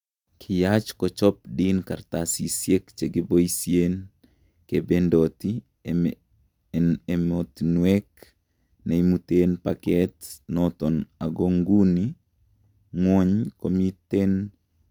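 Nothing in this speech recording gives away a technical fault. There is no moment in the audio that needs a timestamp.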